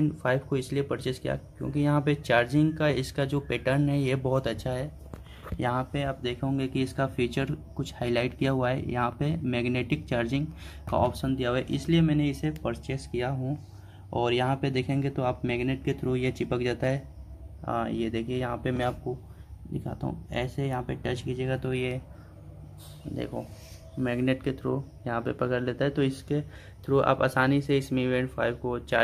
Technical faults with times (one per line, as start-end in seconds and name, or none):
none